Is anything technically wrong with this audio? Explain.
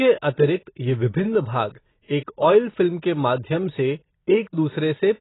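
Yes. AAC compression damage runs through the whole clip, and it is likely the cause of what you hear. The speech has nothing above 3.9 kHz, a cut-off that points to a very low AAC-LC bitrate, around 16 kbps. At that rate the encoder quantises each frame's frequency lines so coarsely that it discards the upper band and thins what remains. The result is heavy damage: dull, muffled speech with a smeared, warbling texture.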